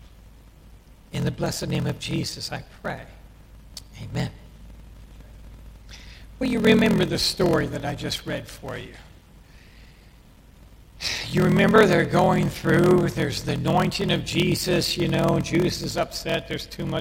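From start to end, a steady buzz at about 41.7 Hz runs under the sound. This is a block size mismatch (padded). Each block is written short and topped up with silence. The gaps cause the buzz. Playback runs at 0.889 times normal speed, at roughly normal pitch. This fits 1024-sample blocks read as 1152.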